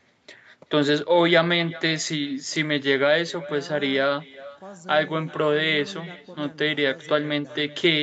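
Throughout the speech, a quieter, thinner copy trails each phrase by roughly 400 ms, about 22 dB down. This is echo with no canceller: the far end's loudspeaker feeds back into its microphone and nothing removes it. Unlike room reverb, it is a distinct delayed repeat, not a smooth decay.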